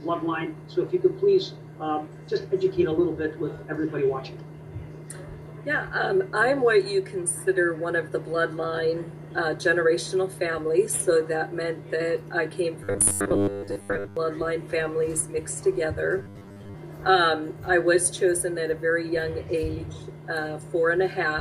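From 12.84 to 14.17 s, and again from 16.18 to 16.75 s, there is robotic sound from repeated short buffers. The sound becomes a rigid, metallic buzz at 100 Hz. Most of the audio is likely replaced by a repeated 10 ms chunk, filling gaps left by late-arriving data.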